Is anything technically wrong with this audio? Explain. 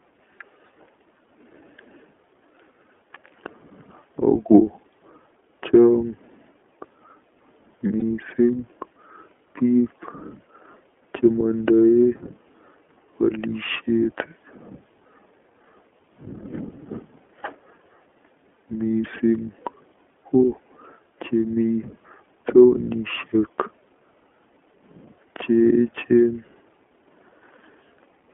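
Yes, there are two problems.

Throughout, the speech has passed through the iLBC codec. Each frame is coded independently, and the 20 ms framing fits its 15.2 kbps mode. The telephone band of about 250 to 3400 Hz removes everything higher, leaving the voice plainly rough and synthetic.

From 8.00 to 8.02 s there are lost iLBC frames, consistent with a single missing 20 ms frame. The decoder covers the gap by repeating the last pitch cycle with added noise, so a brief buzzy held sound replaces it. The voice recovers immediately afterwards.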